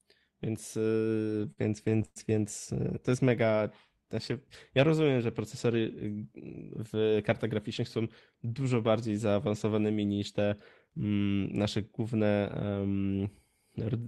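From 0.95 to 2.18 s, packets reached the receiver late or too slowly, so the jitter buffer kept running dry. The result is repeated stalls (stutter): fourteen short gaps, the longest 104 ms, were bridged by stretching the last sound, about 281 ms in all. Nothing is lost, but the speech drags and stutters just before "więc y to jest".

Between 3.24 and 4.33 s, right after "więc y to jest", the jitter buffer slow-down built up a reserve by repeating single pitch periods. This added 90 ms and ran the speech at 93% speed at unchanged pitch, so sounds are drawn out leading into "ja rozumiem że procesory".

From 6.80 to 7.99 s, the buffer held more audio than it wanted. The jitter buffer speed-up trimmed pitch periods, removing about a tenth of a second. The speech runs at 108% speed with its pitch intact and sounds hurried just before "dużo bardziej zaawansowanymi niż".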